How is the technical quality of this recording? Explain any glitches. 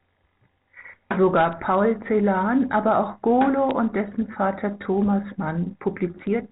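The speech carries three short bursts of crackle from bit errors on a digital phone line, heard over telephone-band audio that stops at 4 kHz, consistent with 64 kbit/s A-law coding. Bit errors on a digital phone line occur at 1.53 s, 3.71 s, and 6.19 to 6.27 s. Flipped bits each corrupt one sample. A hit on the sign or an upper bit throws that sample far off, giving a sharp tick. The error rate is a fraction of a percent, so the ticks are sparse. The last, longer burst spreads across what sounds like several frames as a brief crackle.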